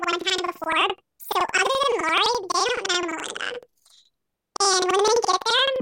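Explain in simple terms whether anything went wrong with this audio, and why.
Something went wrong for the whole clip. The speech sounds an octave too high, with a fast flutter about 11.7 times a second. This is planar audio read as interleaved. The sound was stored in blocks, all left-channel samples first, then all right. The player read them as alternating left-right pairs. So each 85 ms block plays twice at double speed, left then right. The overall pace stays normal. The block length fits a 4096-sample block.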